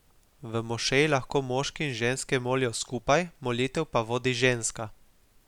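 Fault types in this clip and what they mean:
Nothing to flag here: the speech comes through without any technical fault worth listing.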